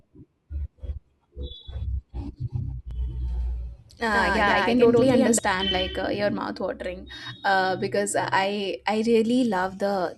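A second, slower capture path, or an edit holding two copies out of step, likely mixed the speech in twice: from 2.91 to 5.39 s, just before "like uh your mouth", a doubled audio track trails by about a tenth of a second at nearly equal level, starting and stopping abruptly with no room colour.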